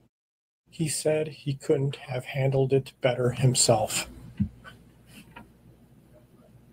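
This speech clip has nothing technically wrong with it.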